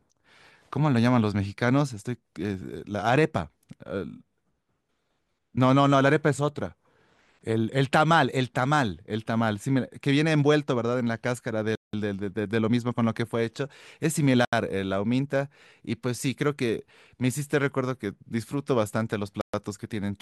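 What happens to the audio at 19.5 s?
The speech cuts to silence from 19.41 to 19.54 s, about 124 ms, then resumes: a Bluetooth stall, likely from interference delaying packets until the headphone buffer ran dry.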